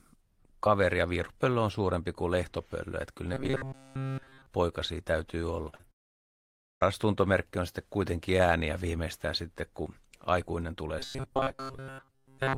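Speech with a few network-type problems. From 3.34 to 4.46 s it turns into a stiff metallic buzz at 134 Hz, the robotic sound from repeated short buffers, likely from most of the audio being replaced by loops of the last 7.5 ms or so. Right after "poikasi täytyy" there's short concealed packet loss at 5.69, 5.75 and 5.81 s, where the receiver patched gaps of 40, 37 and 22 ms by extending the previous sound, giving a quick smear. Then from 5.91 to 6.83 s comes a long network dropout, likely about 0.9 s of audio that never arrived. It's mostly dead silence before the audio picks back up at "tuntomerkki on sitten kuitenkin". After "sitten kun aikuinen tulee" the same 134 Hz robotic buffering returns at 10.99 s and runs to the end.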